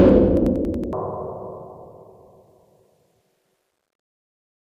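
A short clip of everyday sounds, and for the first second (0 to 1.0 s) it drops an octave, doubled and choppy, fluttering at about 10.8 Hz. That's interleaved audio read as planar: each roughly 93 ms block, which fits a 4096-sample buffer, gets split into half-speed halves.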